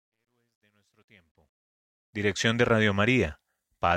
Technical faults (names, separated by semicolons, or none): truncation distortion on a fade